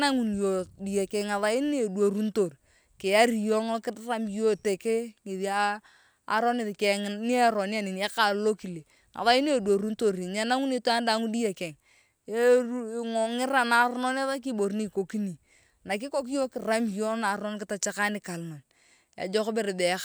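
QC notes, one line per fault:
Nothing to flag here, the speech comes through with no faults heard anywhere in it.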